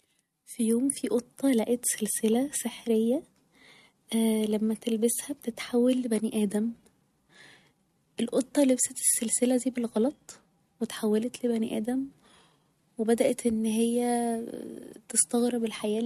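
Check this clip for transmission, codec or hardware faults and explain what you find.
Nothing to flag here: I listened through the whole speech recording and didn't catch a single fault anywhere in it.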